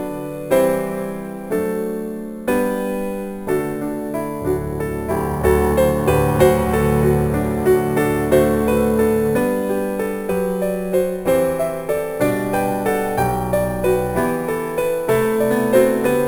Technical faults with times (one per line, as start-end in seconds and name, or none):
0.00-16.28 imaging from sample-and-hold upsampling